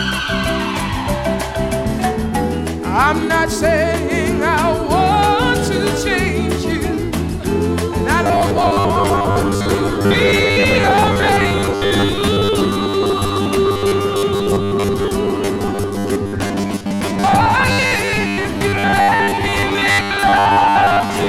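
From 8.24 s to the end at 21.28 s, the sound turns rigid and metallic, with a fixed 100 Hz buzz. This robotic sound from repeated short buffers likely comes from audio arriving too seldom, so 10 ms fragments are replayed to fill about half the time.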